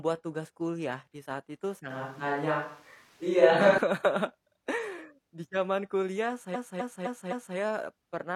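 From 1.90 to 3.78 s the speech turns roomy and hollow with little level change, likely a switch to a distant microphone, with room noise around 35 dB below the speech. From 6.51 to 7.53 s, repeated frames replay a 256 ms block four extra times, producing a stutter and lengthening the audio by 1.02 s.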